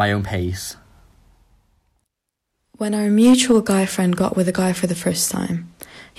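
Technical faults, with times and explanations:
3.21 to 3.71 s, hard clipping. The speech is pushed about 5 dB past the level this stage can pass. Its peaks are sliced flat. Those flat tops create harmonics high in the spectrum, so the loud parts sound distorted for half a second.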